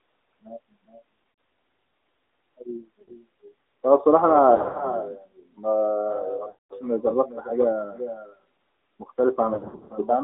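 From the start the speech sounds boxed-in and buzzy, squeezed into a band from about 250 Hz to 3.7 kHz with nothing bright above it. The consonants are dulled and the voice has a synthetic, slightly metallic grain. This is the AMR narrowband mobile codec. It samples at 8 kHz and rebuilds the voice from a compact vocal-tract model with a few pulses per frame. The clearly audible roughness points to a middle-rate mode, not the codec's best.

Running through the whole clip as well, every phrase is trailed by a fainter, thinner copy, roughly 0.4 s behind and about 11 dB down. This is echo with no canceller. The far end's loudspeaker feeds its microphone and nothing strips that path out, so the voice returns after the network round trip.

Lost AMR speech frames break up the sound five times. At 1.30 to 1.38 s, about 80 ms goes missing and the sound smears and sags briefly. At 3.02 to 3.12 s there is a similar 60 ms warble. 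From 4.56 to 4.83 s several short gaps are scattered across about 240 ms, giving a fluttery, stuttering stretch. At 6.50 to 6.73 s a solid 200 ms run stretches the sound into a drawn-out buzz that fades toward silence before the voice returns rough. From 9.54 to 10.09 s scattered gaps totalling about 260 ms chop up the ending. In each case the decoder is reusing its last good settings at falling gain to cover frames that failed their check.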